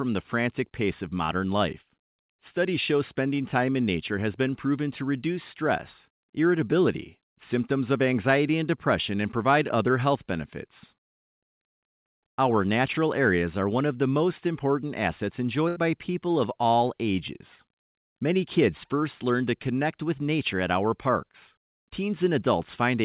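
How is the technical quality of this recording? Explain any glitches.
The recording has two packet-loss glitches, both from a call connection whose band ends at 4 kHz, consistent with G.711 mu-law telephone coding.

At 1.26 to 1.30 s, just after "the frantic pace of", there is short concealed packet loss. About 20 ms of audio arrived too late, and the receiver patched the hole by extending the preceding sound before blending back. It is heard as a brief smear or wobble.

At 15.68 to 15.78 s, a burst of packet loss falls between "the most important assets" and "by people of all". The receiver filled about 78 ms by prolonging the last sound while fading it, so it becomes a held buzz or a dying hiss. Playback then resumes with roughly 80 ms of the original missing.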